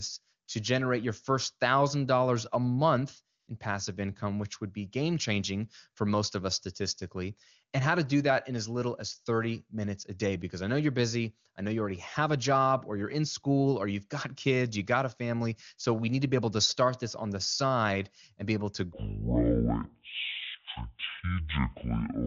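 AMR comfort noise appears twice: the sender judged the line silent and stopped transmitting speech frames, so the receiver filled the gap with synthetic noise. For 20 ms at 0.45 to 0.47 s, just before "to generate your first", and for 80 ms at 3.39 to 3.47 s, between "a month" and "in passive income which", the real background drops out and is replaced by a smooth, steady hiss.

From 18.93 s, right after "and be able to", to the end at 22.26 s, the audio plays at the wrong speed, likely because that section was fitted to the wrong clock. It runs at 0.537 times normal speed, dropping the pitch by roughly ten semitones so the voice sounds deep, slow and dragged.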